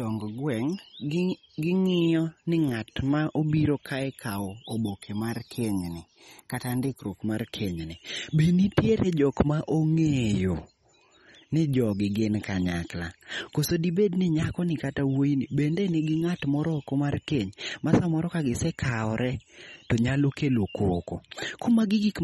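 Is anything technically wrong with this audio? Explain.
Yes. MP3 compression damage runs through the whole speech clip and is plainly audible. Nothing is present above 15 kHz, and the speech has a watery, swirling quality with metallic chirps on s sounds and softened attacks. The likely cause is a lossy MP3 encoder working with too few bits, which fits a low bitrate around 32 kbps. Short of bits, it drops the treble above a fixed cutoff and zeroes weak frequency lines, which then flicker on and off between frames.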